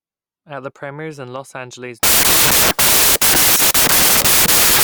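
From 2.03 s to the end, loud hiss swamps the speech, which runs 1.5 times fast and higher-pitched: wrong sample width, fitting 16-bit data read as packed 24-bit.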